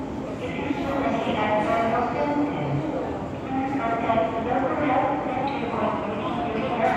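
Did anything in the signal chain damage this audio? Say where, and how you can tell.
Yes. From 5.44 s to 6.77 s the sound runs about 5.9% fast and rises by roughly a semitone (about 99 cents), then snaps back. This drift correction step likely comes from clock-matching software at the buffer stage changing the playback rate in one jump.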